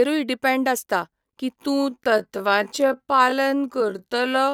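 At 1.54 s, right after "डिपॅंड आसता की", the speech enters a time-stretched section that lasts to the end of the clip at 4.53 s. The pace drops abruptly to about 0.58 times normal speed while the pitch stays where it was. To fill the extra length, short fragments of the waveform have likely been repeated and overlapped. As a result, the syllables sound drawn out, and the speech drags.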